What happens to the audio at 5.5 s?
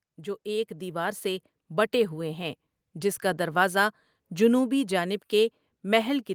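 Nothing goes wrong at 5.5 s; the speech carries on intact through that moment.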